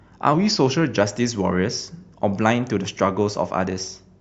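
From 0.34 to 1.00 s, a drift correction step is likely at work: software keeping two clocks in line has slowed playback in a single jump, by about 6.4 percent, to rebalance its buffer. Because speed and pitch move together, the speech drops roughly 115 cents, a little over a semitone flat, and runs audibly slower for about two-thirds of a second before snapping back to its normal rate and pitch.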